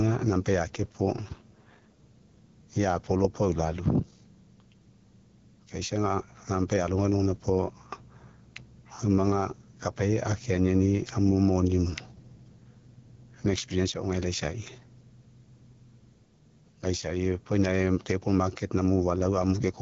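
Gain pumping runs throughout: the level swells in pauses and ducks around 10 dB under louder sounds, likely from excessive gain hitting a fast limiter. The waveform looks flattened. AMR wideband (HD Voice) codec coding is also constant, with a plainly raspy texture that fits a low rate near 8.85 kbit/s. The spectrogram shows nothing above 7.1 kHz.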